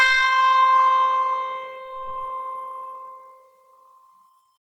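Throughout the music, tones sound grainy, rough and noisy while the top end stays open to about 20.1 kHz; this is likely Opus compression in CELT mode, consistent with a bitrate near 16 kbps.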